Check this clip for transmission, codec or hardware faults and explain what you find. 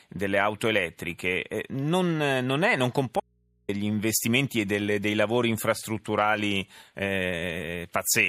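One fault: an audio dropout to a faint residue from 3.2 to 3.69 s. The wanted signal was most likely lost upstream, perhaps through a failed link or connection, while the input stage after the break stayed powered and open. For just under half a second the speech stops abruptly and only mains hum remains, sitting about 40 dB below the speech level. The speech then returns just as suddenly, which sounds like a cut rather than a natural pause or fade.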